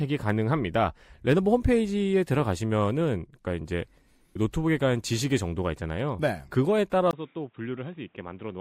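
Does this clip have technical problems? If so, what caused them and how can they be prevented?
Yes. At 7.11 s, after a 20 ms gap, the speech drops roughly 10 dB, loses everything above 3.8 kHz and gains new background noise, likely an input switched to a poorer device. Lock the recording input to one microphone and disable automatic device or headset-profile switching.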